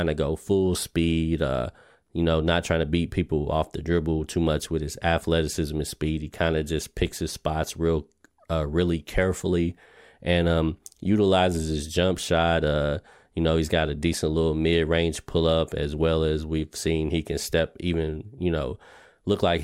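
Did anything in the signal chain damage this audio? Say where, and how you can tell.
No, nothing along the chain from capture to playback audibly damaged this speech recording.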